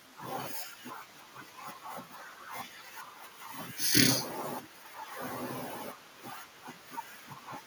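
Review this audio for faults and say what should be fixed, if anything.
Echo leak appears at 1.08–1.4 s, 2.39–2.48 s, 4.64–4.77 s and 5.99–6.19 s: faint scraps of speech returning 372 ms late, about 25 dB down. The likely cause is a far-end loudspeaker whose echo canceller passed residue back. Unlike room reverberation, these are discrete, delayed repeats rather than a smooth decay. To prevent it, the far end should use a headset or a better-tuned echo canceller.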